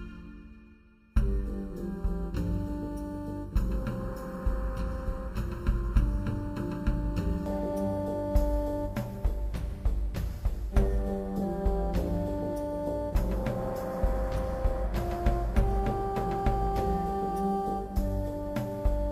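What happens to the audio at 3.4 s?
At 3.4 s you're in a stretch of channel delay (comb filtering) that runs from the start to about 7.46 s. One channel lags by just under a millisecond, and summing to mono cancels shared content at evenly spaced notches from around 700 Hz up, so it sounds hollow and phasey.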